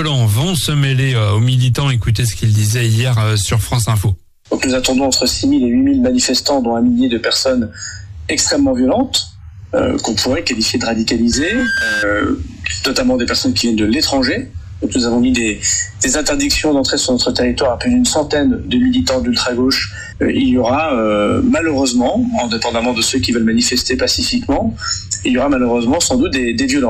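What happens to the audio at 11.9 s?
At 11.9 s a loudspeaker feedback squeal is sounding: from 11.31 to 12.08 s the mic-speaker loop runs away at 1.6 kHz, swelling within under half a second to roughly programme level.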